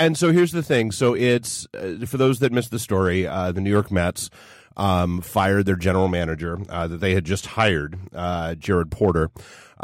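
Throughout, sample clock jitter from an unsteady converter clock: roughness about 50 dB down, rising on loud, bright speech, vanishing in pauses, unlike steady hiss.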